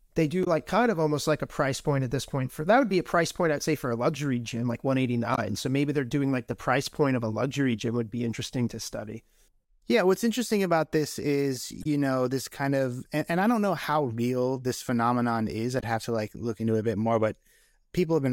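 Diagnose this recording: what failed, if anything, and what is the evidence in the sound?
Brief glitches at 0.43–0.47, 5.34–5.39, 11.81–11.86 and 15.79–15.83 s point to damaged data in a compressed stream: the decoder misreads corrupted frames and resyncs.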